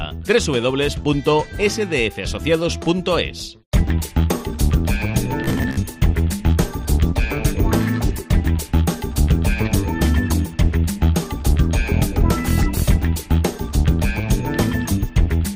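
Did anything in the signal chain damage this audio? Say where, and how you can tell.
Yes. At the driver or buffer stage, data likely arrived too seldom, so about half of 5.44 to 5.77 s is robotic sound from repeated short buffers, buzzing at 66.8 Hz.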